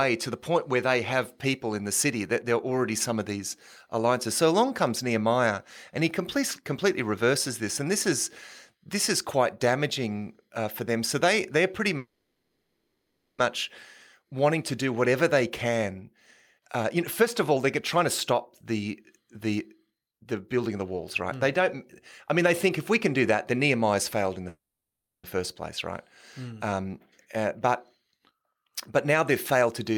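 Call audio freezes at 11.97–13.40 s and 24.49–25.26 s interrupt this speech recording. The sound is stretched into a fading buzz for 1.41 s and then 0.75 s, the second mostly silent. Packets were likely held up in transit so the jitter buffer ran dry, and the talk resumes where it stopped with nothing lost. Jitter buffer speed-ups follow at 16.58–18.62 s (113%, about 0.3 s cut), 19.94–21.71 s (108%, about 0.15 s), 22.28–23.60 s (105%, about 0.07 s) and 27.25–29.98 s (106%, about 0.15 s). The receiver trims repeated pitch-period slices to shed the built-up delay, so delivery sounds hurried at unchanged pitch.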